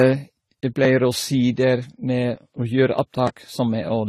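From start to finish the speech has a dull top end, with nothing above 14 kHz, and two different flavours of compression grit sit on top of each other, heard together. That layering is the giveaway of likely transcoding between lossy codecs, probably a Vorbis encode that was re-encoded as low-bitrate AAC-LC, with the second codec burning bits on the first one's artefacts.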